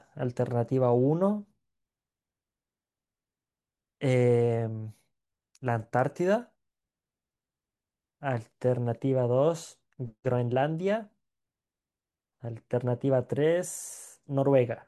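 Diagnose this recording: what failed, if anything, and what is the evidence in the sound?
Nothing seems to have failed here, as far as I can hear; there's no stage to point a finger at and nothing in the speech that signals trouble.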